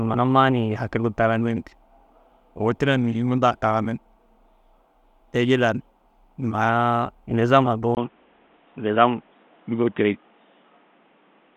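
At 7.95 s the speech breaks for about 20 ms, then returns dull and boxy at a similar level until the end, with nothing above 3.8 kHz and faint new background noise. A spectrogram shows a sudden flat ceiling, likely from the input switching to a poorer device.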